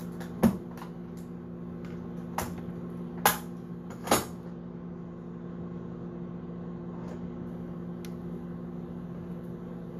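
From 4.46 to 7.47 s, channel delay (comb filtering): one channel lags by a couple of samples, so the mono sum cancels around 10 kHz, dulling the top. Unlike flanging, the notch never moves.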